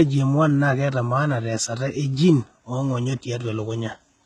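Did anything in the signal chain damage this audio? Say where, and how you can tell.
Yes, at the codec stage. Throughout this speech, treble stops at 11.7 kHz, and s sounds turn gritty and metallic. Heavy HE-AAC compression is the likely cause, rebuilding treble by band replication at around 16 kbps.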